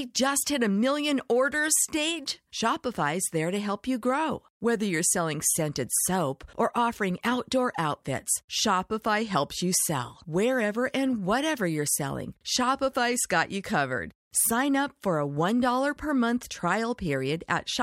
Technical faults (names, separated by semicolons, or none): none